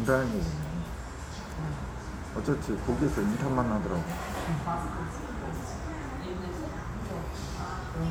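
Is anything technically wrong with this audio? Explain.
No, there are no faults.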